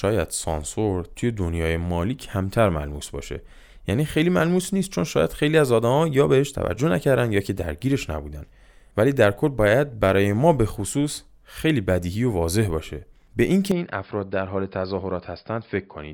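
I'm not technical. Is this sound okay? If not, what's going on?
No. At 13.7 seconds the speech suddenly turns duller and a little quieter until the end, with no gap. Nothing above 5.1 kHz gets through. The likely cause is an input switched to a poorer device, which cuts off the crisp high sounds.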